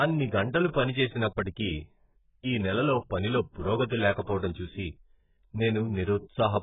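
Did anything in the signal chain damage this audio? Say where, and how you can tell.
Yes, at the codec: the speech stops above 3.8 kHz throughout and sounds smeared and warbly, which plain filtering wouldn't do. This is likely AAC compression near 8 kbps.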